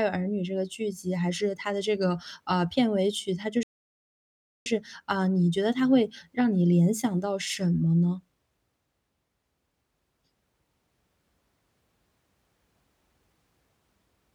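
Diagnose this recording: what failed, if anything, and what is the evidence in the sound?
The failure is at the playback end: a playback stall. At 3.63 s the speech just cuts out mid-flow and there's dead silence until 4.66 s, roughly a second of nothing, before the audio picks up again. The likely cause is the player running dry of buffered data or its output thread getting blocked, so it had nothing to hand the device until it caught up.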